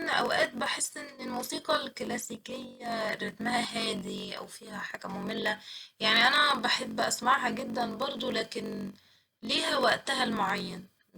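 A steady buzz at about 46.9 Hz runs under the speech for the whole clip, and everything plays slightly slow, at 0.938 times normal speed, while the pitch stays about where it should be. This is a block size mismatch (padded). One stage hands over shorter blocks than the next one reads, and the missing part of each block is filled with silence. The buzz rate fits 1024-sample reads at 48 kHz, with writes of roughly 960 samples leaving a short gap in every block.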